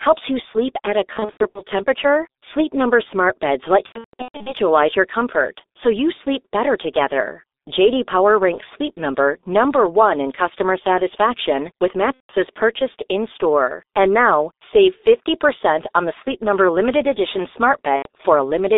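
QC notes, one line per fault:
throughout: G.723.1 codec. The speech is held to a band of roughly 300 Hz to 3.7 kHz and sounds muffled and hoarse, with smeared consonants. The damage is heavy, which fits a G.723.1 stream at around 6 kbit/s. This differs from simple band-limiting because a rough, hoarse texture sits on the voice. The voice colour also lags behind quick changes, since the codec updates its voice model only once per 30 ms frame.
1.13–1.61 s, 3.86–4.53 s, 12.15–12.32 s, 17.96–18.08 s: VoIP packet loss concealed by the speech codec. In the first two spans the losses are scattered: about 240 ms lost over 420 ms with a longest run of 90 ms, then 450 ms lost over 600 ms with a longest run of 150 ms. The last two are single runs of 150 ms and 90 ms. The decoder repeats its last pitch and filter, so the sound stretches out and fades, goes silent from the third lost frame in a row, and stays weak for a moment after the audio returns.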